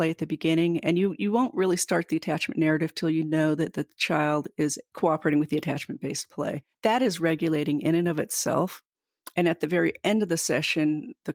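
No technical fault can be heard anywhere in the speech recording, and the signal holds steady throughout.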